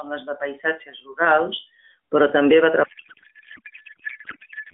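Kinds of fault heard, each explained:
Codec payload misread: the receiver unpacked octet-aligned AMR frames as bandwidth-efficient, scrambling the codec fields, so after "rurals però també va" the speech turns to garbled warbling noise through to the end.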